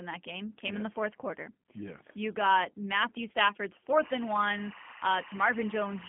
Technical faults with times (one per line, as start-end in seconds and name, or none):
0.00-6.08 G.729 codec